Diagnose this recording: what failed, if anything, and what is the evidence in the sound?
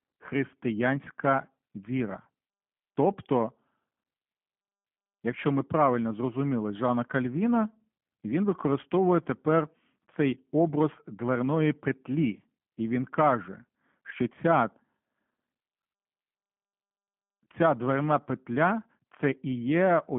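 The codec stage failed: G.729 coding damage runs through the entire clip, making the speech rough and faintly synthetic, consistent with an 8 kbit/s G.729A encoder rebuilding each 10 ms frame from sparse pulses. A spectrogram shows energy only between 150 Hz and 3.4 kHz, with nothing above.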